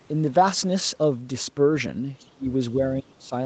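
From 2.19 to 2.27 s, a faint trace of another voice, about 30 dB below the speech, is likely the other side's voice leaking through past the echo canceller. On a spectrogram it shows as a weak, separate harmonic smear. Then at 2.34 to 2.46 s and again at 3.01 to 3.33 s, the speech dips sharply, by around 25 dB and then around 30 dB. The talker seems likely to have been suppressed in double talk, turned down along with the echo. On the waveform these look like abrupt hollows in the envelope. The spectrogram shows energy collapsing across the band, with nothing above the 8 kHz limit of the call path.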